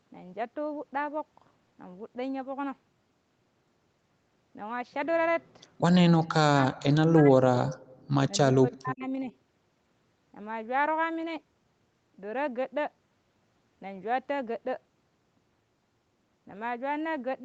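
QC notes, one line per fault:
6.25–7.42 s and 8.55–9.29 s, speech suppressed in double talk: the speech sinks sharply, by around 40 dB at its deepest, for roughly 0.7 s in the first stretch and about half a second in the second. This is likely an echo canceller on a call that could not tell its own talker from loudspeaker echo while both sides were talking, so it pulled everything down together.
7.99–8.05 s, echo leak: a brief, faint scrap of delayed voice surfaces, lagging the original by 345 ms and sitting about 40 dB under the speech. The likely cause is one side playing the call on a loudspeaker whose echo canceller let a fragment of the picked-up sound slip back, heard alongside the 8 kHz band limit of the Opus call path.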